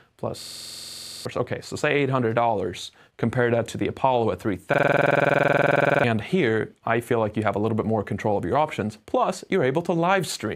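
Twice the system stalled while the sound hardware kept replaying its ring buffer, a system hang loop. From 0.42 to 1.25 s, one 46 ms slice, which fits a 2048-sample buffer, repeats 18 times at 21.5 Hz, giving a machine-gun stutter. From 4.74 to 6.04 s the same loop repeats 28 times. When normal playback returns each time, about 0.7 s and then roughly one and a half seconds of sound are missing.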